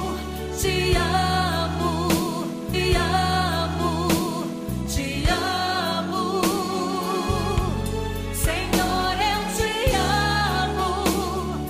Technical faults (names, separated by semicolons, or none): stream segment repeated